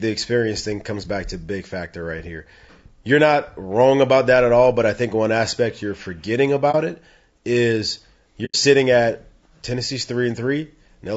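Throughout the clip the speech carries plainly audible codec damage: a grainy, rough texture with noise filling the gaps between harmonics, and a top band that sounds either lowered or synthesised. This is the signature of low-delay AAC compression, likely AAC-ELD at a bitrate around 32 kbps. The coder works on short low-delay windows. At this rate it cannot spend enough bits on every frequency line, so the quantisation noise spreads across the spectrum.

Two AAC frame losses with muting follow. At 6.71 to 6.75 s, right after "one aspect you're forgetting", the level briefly dips for about 30 ms, consistent with a single lost frame whose spectrum the decoder zeroed. At 8.45 to 8.56 s, after "it is", a longer soft-edged hole of about 90 ms opens, which fits three consecutive lost frames. In both cases the overlapping windows fade the sound out and back in around the gap rather than cutting it off abruptly.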